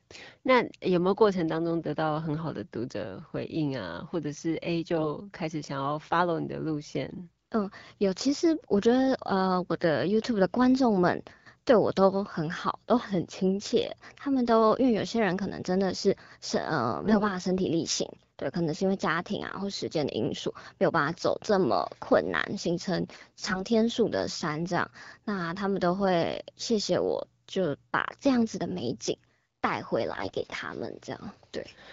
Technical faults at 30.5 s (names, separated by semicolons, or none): AMR bit errors